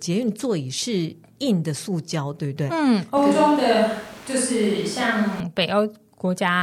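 A speech clip in which, from 3.17 to 5.40 s, the close microphone's signal likely dropped out or went unused and the recording fell back on a switch to a distant microphone. The voice turns roomy and hollow at once, losing low-end body, while its loudness stays about the same and the background noise rises to roughly 25 dB below the speech. Both transitions are abrupt, with no crossfade.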